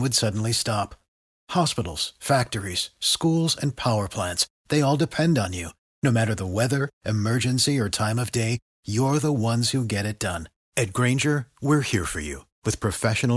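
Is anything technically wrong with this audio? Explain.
No, nothing technically wrong is audible here.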